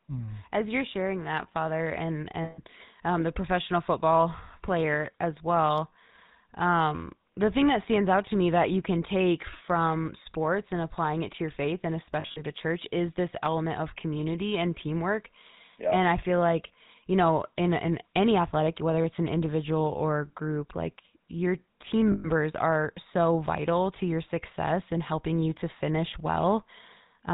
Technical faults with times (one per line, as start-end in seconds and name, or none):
0.00-27.33 GSM full-rate codec
2.44-2.60 lost GSM frames
12.20-12.42 lost GSM frames
22.12-22.28 lost GSM frames